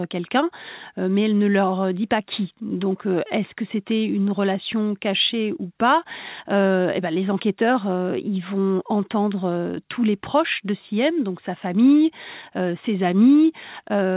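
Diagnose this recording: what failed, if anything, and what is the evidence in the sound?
Nothing failed; the call path works as intended.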